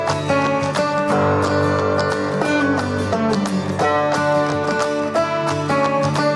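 Nothing technically wrong can be heard in this audio. There is no fault to place at any time or to trace to a cause.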